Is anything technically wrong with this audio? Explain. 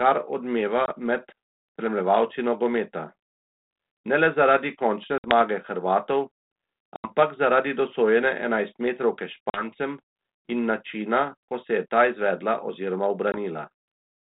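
Yes. The speech shows packet loss on an ADPCM call at 0.86 s (20 ms lost), 5.18 s (60 ms), 6.96 s (80 ms, just before "zaradi dosojene enajstmetrovke"), 9.5 s (40 ms, after that phrase) and 13.32 s (20 ms, after "je ta izvedla oziroma"). The hole lengths fit 20 ms packets.

Missing packets become silence, and the decoder's adaptive predictor and step size lose step with the sender's. Each gap is a sharp-edged dropout, and the speech returns slightly distorted, settling over some tens of milliseconds. On a waveform the gaps are flat lines with abrupt edges. A spectrogram shows blank vertical strips, under the telephone-band cut-off at 4 kHz of the G.726 coding, which sounds consistent with 32 kbit/s.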